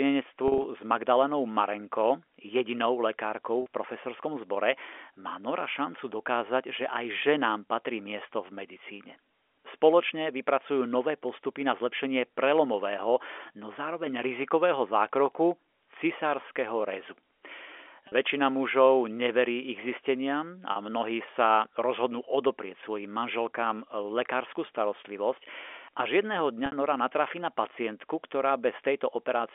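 Brief buzzy, held-note stutters at 0.48–0.64 s, 3.62–3.66 s, 18.08–18.12 s, 20.72–20.76 s and 26.66–26.72 s are packet loss with pitch repetition. The receiver loops the last pitch period across missing packets, 40 to 60 ms each time, and 100 ms scattered through the first event.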